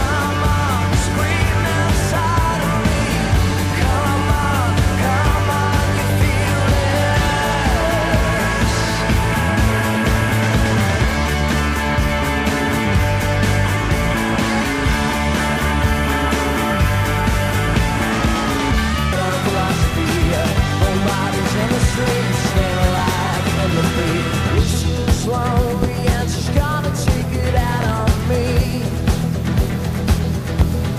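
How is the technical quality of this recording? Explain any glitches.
Two glitches stand out, both loud pops. At 25.83 to 25.86 s a single sharp pop rises roughly 15 dB above the sound. At 27.82 to 27.92 s a double pop peaks about 10 dB above it. Each is likely a voltage pulse from a plug, switch or static discharge, shaped by the circuitry after it. Unlike a dropout, the sound carries on underneath rather than cutting out.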